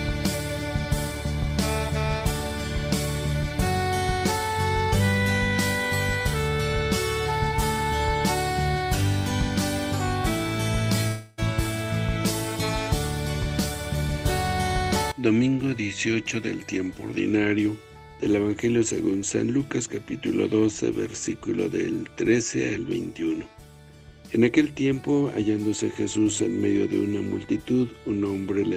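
From 11.07 to 11.40 s, the sound turns into a fading buzz and hiss for about 0.3 s. The audio then resumes with roughly 0.3 s missing. This is likely a long network dropout, where the receiver stretched the last sound to cover the gap.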